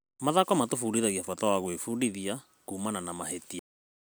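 A speech clip with two faults. From 1.24 to 1.85 s the speech slows by about 5.8% and drops about a semitone (104 cents) in pitch, then snaps back to normal. That is a drift correction step, most likely clock-matching software stepping the playback rate to rebalance its buffer. On a spectrogram the harmonic lines shift down abruptly at 1.24 s and jump back up at 1.85 s, and the syllables in that span look slightly stretched in time. The second fault is a cut-off end at 3.59 s. The speech stops in the middle of a sound because the final buffers never reached the output. The waveform falls straight to silence with no decay tail, and the spectrogram shows a vertical edge where all energy ends at once. Any click from that instant appears as a thin broadband stripe.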